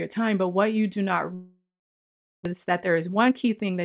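Speech carried over a narrowband call path, with nothing above 4 kHz, which fits G.711 A-law. A long network dropout likely interrupted the stream just after "what you do not." From 1.34 to 2.47 s the last sound is stretched into a fading buzz that gives way to near-silence, and roughly 0.62 s of speech never returns. The backlog then left the jitter buffer holding too much audio. It trimmed short pitch-period slices repeatedly from 2.51 to 3.79 s, so the speech runs at 125% speed, hurried but at unchanged pitch.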